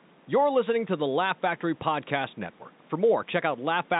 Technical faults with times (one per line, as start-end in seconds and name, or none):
none